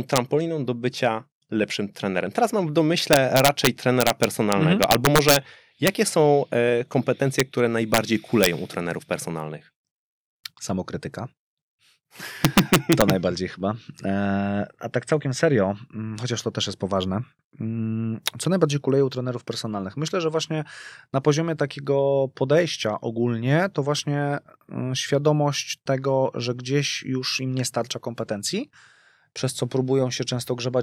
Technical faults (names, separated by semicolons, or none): integer overflow